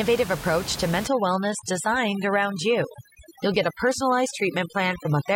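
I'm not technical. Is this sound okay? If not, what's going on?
No. From about 1.07 s, right after "approach to", to the end, the background drops and breaks up into twinkling, warbling specks. That is overdone noise removal: a cleanup tool set too strong strips out the room noise and quieter parts of the voice along with it.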